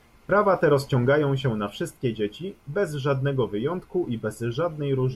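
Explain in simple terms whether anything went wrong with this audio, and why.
Nothing went wrong with this audio, because no fault can be heard anywhere in it.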